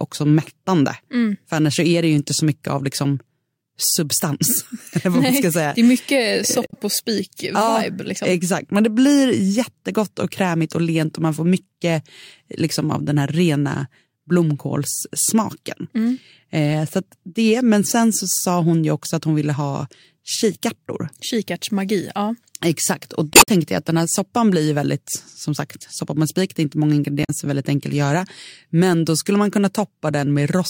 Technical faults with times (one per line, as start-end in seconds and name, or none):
6.65-6.74 damaged data in a compressed stream
23.31-23.48 damaged data in a compressed stream
27.23-27.30 damaged data in a compressed stream